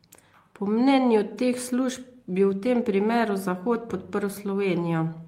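At 2.65 s there is a lost packet rebuilt from error correction. For about 20 ms the speech turns briefly rougher and noisier, with no gap. The loss points to a single packet. The following packet carried a low-bitrate copy, which the decoder played instead.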